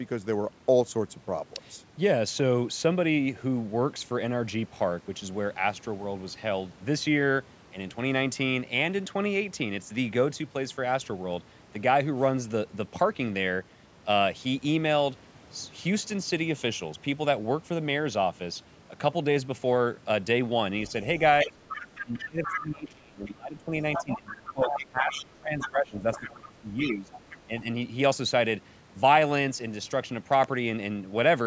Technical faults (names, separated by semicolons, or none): other side's voice leaking through; speech suppressed in double talk; loud pop